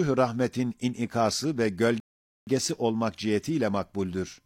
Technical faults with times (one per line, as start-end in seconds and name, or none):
2.00-2.47 rebuffering stall